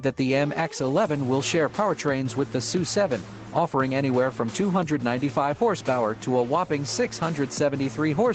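No technical faults are audible.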